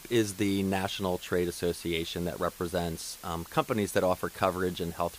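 From start to finish, the speech is stored with only a handful of bits per sample, consistent with roughly 7-bit resolution, and dither is added before rounding. That turns the rounding error into a constant, even white hiss, only about 20 dB below the voice, with no audible distortion.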